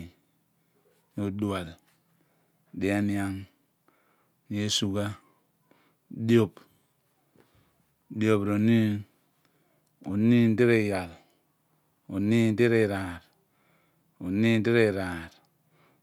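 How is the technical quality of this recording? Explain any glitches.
No technical faults are audible.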